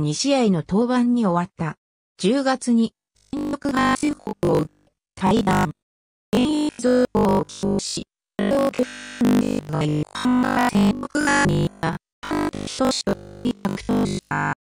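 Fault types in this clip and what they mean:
Robotic sound from repeated short buffers: from 2.95 s to the end, the sound turns into a stiff, metallic 50 Hz buzz. That fits a 20 ms chunk being replayed repeatedly, likely because new audio kept arriving too late, so most of the real material gets skipped.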